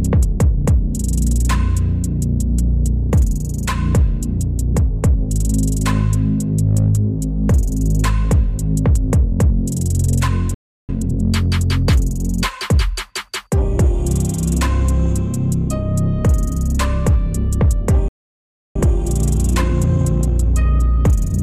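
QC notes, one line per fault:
10.54–10.89 s, playback stall: the sound cuts out mid-flow for about 0.34 s of silence, then resumes. This is likely a player starved of data or a blocked audio thread. Unlike a dropout, the gap is long and complete rather than a partial loss.
10.89–11.23 s, time-compressed catch-up: for about a third of a second the sound runs at twice normal speed with pitch unchanged, as small pieces are cut and cross-faded to clear the backlog. The unchanged pitch separates this from a sped-up resample, which would rise in pitch.
18.08–18.76 s, playback stall: a longer halt of about 0.67 s, again dead silence in mid-flow before the sound continues. The likely cause is once more an underrun or stalled output thread.
18.76 s to the end, time-compressed catch-up: after the second gap the audio runs about 1.1 times fast at normal pitch until the clip ends, a gentle hurry from the cross-faded cuts. 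It is milder than the first catch-up and lasts far longer, and its pitch stays steady, unlike a speed or clock drift.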